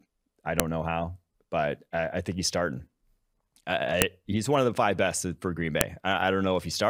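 Sharp clicks at 0.60 s (just before "know how but I"), 4.02 s (before "he's one of the") and 5.81 s are a file header played as audio: pieces were joined with their headers left in. Unlike a dropout, nothing goes missing. A loud snap lands regardless of the speech.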